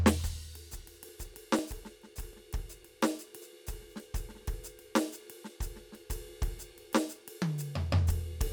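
From 1.09 s to 2.83 s, something blocks the USB bus or the audio driver at a fixed interval of 0.25 s, causing periodic USB or driver dropouts. Each time, around a millisecond of the music is skipped outright and the waveform jumps ahead instead of pausing. Each jump leaves a small discontinuity, heard as an evenly spaced train of ticks, roughly four per second, riding on the music.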